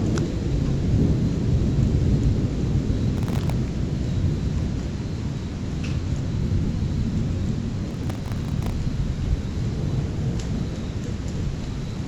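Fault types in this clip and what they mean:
Processor overload crackle: The processor repeatedly missed its deadlines for very short buffers, under a millisecond each, leaving dozens of tiny silent gaps with hard edges. These are heard as bursts of gritty crackle from 3.17 to 3.52 s and from 7.91 to 8.72 s.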